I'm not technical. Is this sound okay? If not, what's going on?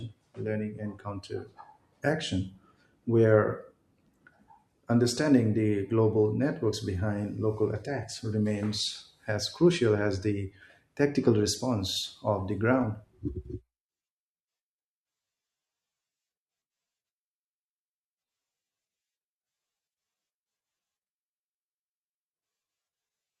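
Yes, there's nothing wrong to hear in this recording.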